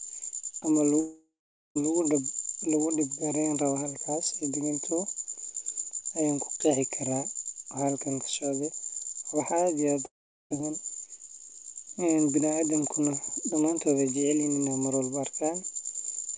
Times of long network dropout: 1.00-1.77, 10.05-10.52

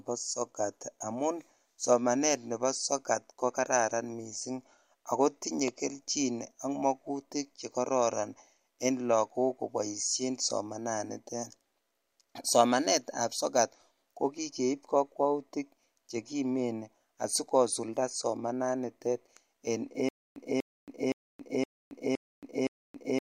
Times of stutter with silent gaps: 20.09-23.27

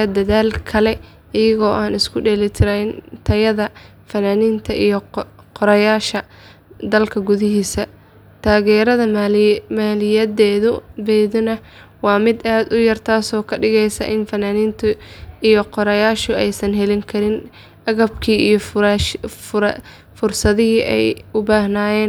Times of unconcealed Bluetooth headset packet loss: none

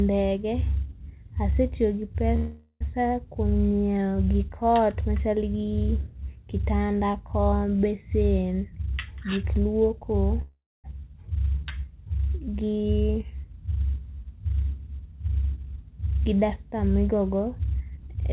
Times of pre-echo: none

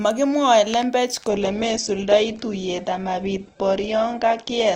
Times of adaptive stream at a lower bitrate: 1.29-4.75

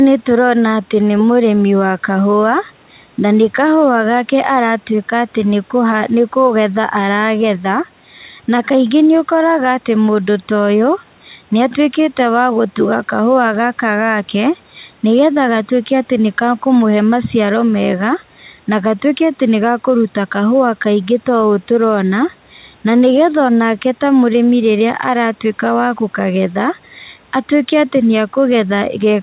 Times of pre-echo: none

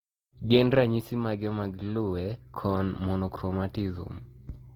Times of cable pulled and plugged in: none

